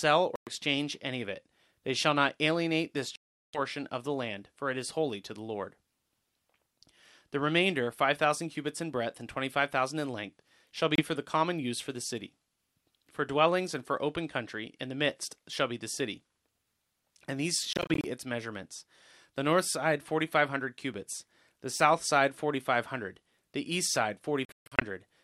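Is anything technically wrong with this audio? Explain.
Yes. Speech drops out five times, likely Bluetooth dropouts: packets miss their deadline at the headphones and are discarded, so playback cuts to silence and resumes further on, skipping that stretch. Gaps fall at 0.36 to 0.49 s, 3.16 to 3.59 s, and 10.95 to 11.01 s. Between 17.73 and 18.08 s come scattered brief holes, none over 28 ms. From 24.45 to 24.84 s the gaps are scattered again, the longest 140 ms.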